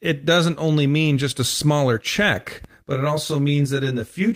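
Right after "just a smaller check", at about 2.64 s, the speech picks up channel delay (comb filtering) that runs to the end at 4.36 s. One channel is arriving roughly 20 ms behind the other, and when the two are folded to mono, the shared content cancels at regularly spaced frequencies, starting very low, around 20 Hz. The voice turns rough and slightly doubled.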